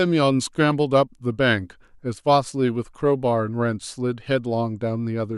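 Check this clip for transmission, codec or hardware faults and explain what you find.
The speech signal stays steady and continuous throughout, with no audible disturbance to its level, bandwidth or timing.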